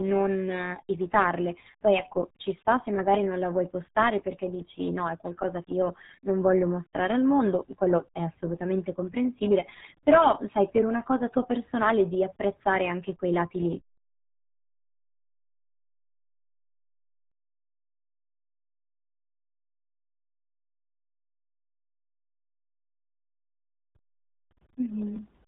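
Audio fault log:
throughout, RealAudio 14.4 codec: heavy low-bitrate coding, consistent with an 8 kbit/s stream, removes everything above 3.9 kHz, leaving the speech muffled and gargly.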